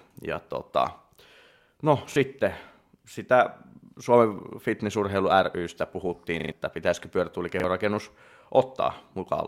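Repeated buffer at 2.12–2.16 s, 6.4–6.52 s and 7.6–7.64 s in this speech clip: fresh audio arrived late, so the same 40 ms chunk replayed with hard joins, briefly twice, then four times at 6.4 s, a stutter swallowing about a tenth of a second.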